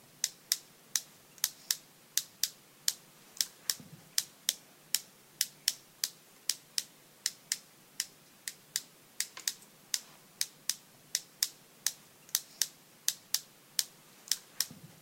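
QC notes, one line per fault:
No faults heard in the sounds; nothing to log.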